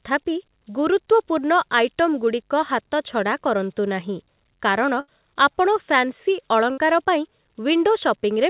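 Right through the clip there are converter idle tones: an undithered converter cycling through patterns, leaving a faint whistle around 7 kHz, about 30 dB below the speech, and a grainy texture under quiet bits. Then there are two bursts of packet loss, at 5.0 to 5.1 s and 6.72 to 6.79 s. Each time the receiver stretches the last sound into a fading buzz or hiss, and about 80 ms and 60 ms of speech go missing before it picks up again. All of this sits inside a narrow call band with nothing above 4 kHz, which fits a G.711 path.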